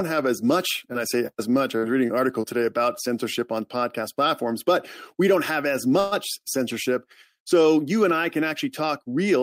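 At 5.99 to 6.14 s, just after "we don't have as", a call audio freeze stretches the last sound into a fading buzz or hiss for about 120 ms, likely from delayed packets draining the jitter buffer. Unlike packet loss, nothing is cut: speech resumes exactly where it stopped, only later.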